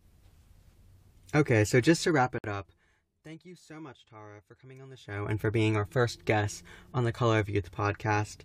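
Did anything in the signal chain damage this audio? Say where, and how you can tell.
Yes. From 1.99 to 3.33 s, just before "you so much", the speech drops about 25 dB with a fine ticking riding on it. This is zipper noise from a gain stage in the driver or buffer path. The level is stepped roughly 300 times a second with no smoothing, so each step clicks.

Inside that fade, from 2.38 to 2.44 s, the speech cuts to a silence of about 58 ms, then resumes where it stopped. This is a gap at a join of encoded pieces, at the codec and storage stage. The pieces were encoded separately, about 6 s apart, and joined with the encoder's start delay and end padding left in.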